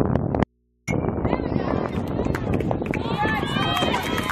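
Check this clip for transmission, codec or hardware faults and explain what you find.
Three faults are audible: one dropout near the start and two places where compressed frames were skipped.

Audio dropout to a faint residue, 0.44 to 0.87 s: for about 0.44 s the sound cuts out abruptly and only mains hum remains, roughly 45 dB below the normal level. The likely cause is a lost signal feed while the downstream input stayed live and picked up hum.

Compressed frames skipped, at 1.92 to 1.96 s and at 3.94 s: the decoder never played whole frames, so the audio leaps forward, by about 70 ms the first time and about 200 ms the second.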